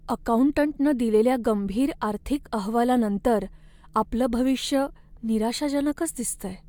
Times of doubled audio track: none

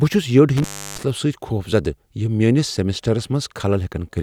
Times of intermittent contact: 0.57-1.03

